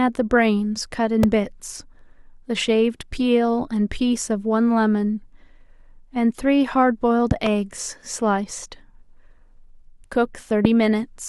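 Loud pops land at 1.23–1.26 s, twice in quick succession at 7.31–7.49 s, and at 10.65–10.67 s. Each one jumps well above the speech, likely from a voltage spike such as a plug or switch glitch.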